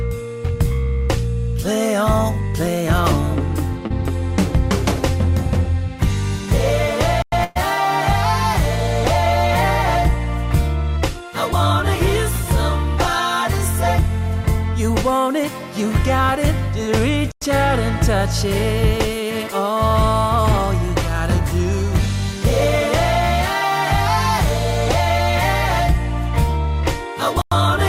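At 3.87 s, a short concealed packet loss: about 20 ms of audio arrived too late for the decoder, and the receiver bridged roughly 26 ms by extending the preceding sound before blending back. It is heard as a brief smear or wobble.

At 7.22 s comes the first gap between chunks. The audio is delivered in 10-second pieces with silence inserted at each join, leaving a hole of 100 ms. The same gap returns at 17.32 s and 27.42 s, a steady 10-second rhythm, with nothing lost, only interrupted.

From 7.44 to 7.57 s, a burst of packet loss removes about 120 ms of audio. The receiver covered roughly 113 ms by continuing the last sound and fading it down, giving a held buzz or dying hiss before playback resumes further along, with the intervening material gone.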